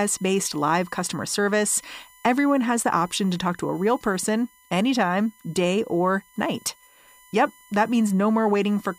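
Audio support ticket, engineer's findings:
USB whine on speech, present throughout. Fixed-pitch tone at 1 kHz, strongest at its 2 kHz harmonic, roughly 30 dB below speech. Spectrogram: steady horizontal lines at 1 kHz and 2 kHz across the full clip, unaffected by speech onsets. Waveform: low constant fuzz between phrases. Probable component: USB audio interface or bus-powered device sharing power or ground. Mechanism: 1 ms USB frame current draw leaking into the analogue path.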